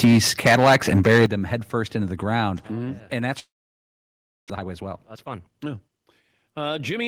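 Right from the start, 0.03 to 0.19 s, there's harsh crackle on the peaks. That's microphone overload, likely the input gain running about 7 dB too hot so the converter flattens the tops, with roughly a third of the samples clipped in that stretch. At 0.05 s the level drops by about 4 dB in one go, a microphone volume step-down, likely the call software backing off the input when it saw the clipping.

It doesn't hold. From 0.45 to 1.26 s the overload is back and worse, likely about 12 dB over, though only around a tenth of the samples are clipped. Right at 1.26 s, just before "them headfirst into the", the level steps down by about 10 dB, a big duck, likely the same automatic gain control. Another step of about 4 dB follows at 2.67 s, right after "headfirst into the ground".

From 3.39 to 4.52 s there's a long network dropout, likely packets simply not arriving. The receiver fills about 1.1 s: a short fading buzz carrying the last sound, then about a second of near silence. 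When audio resumes, roughly 0.6 s of material is gone for good.

Then the jitter buffer speed-up kicks in. Having built up about half a second of extra delay, the receiver trims tiny pitch-period slices to catch up. From 4.55 to 6.03 s the audio runs at about 121% speed, dropping around 0.3 s, and sounds noticeably rushed with the pitch unchanged. From 6.46 to 7.00 s a gentler pass at about 106% removes around 40 ms, still enough to sound hurried.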